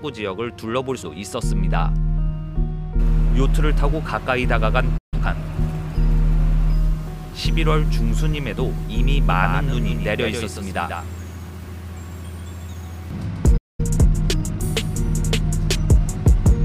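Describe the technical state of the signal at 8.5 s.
At 8.5 s the signal is intact, with no dropout, click, distortion or other fault audible at that moment.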